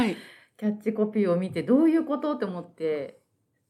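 No dropouts, clicks, distortion or timing errors turn up anywhere in the recording.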